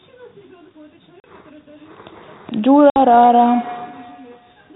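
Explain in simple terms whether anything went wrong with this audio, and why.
Two things went wrong. The first is packet loss on an ADPCM call. At 1.2 s about 40 ms of sound drops out, and at 2.9 s about 60 ms more. Each is a sharp silent gap, roughly two or three lost packets. The decoder then has to catch up, so the sound comes back briefly slightly distorted.

The second is feedback echo between two devices. From 2.55 s to the end, the speech comes back again, repeating about every third of a second. It is much quieter than the speech and sounds thinner and ringing. It happens because another device in the room replays the call and a microphone picks it up again.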